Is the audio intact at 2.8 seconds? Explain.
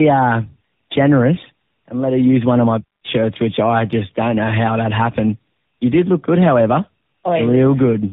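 No. At 2.8 s, as throughout, the speech shows tandem speech coding: two low-rate speech coders in series, the second re-coding the first's degraded output. It sounds muffled, with nothing above 3.8 kHz, and rougher and more warbly than a single codec pass or plain band-limiting would leave it.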